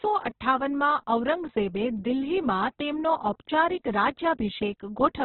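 Heavy Opus compression, likely at a very low bitrate that fits roughly 8 kbps in its CELT music mode, runs through the whole clip. Starved of bits, the encoder narrows the bandwidth so nothing sounds above 4.1 kHz, and the speech comes out muffled, rough and grainy.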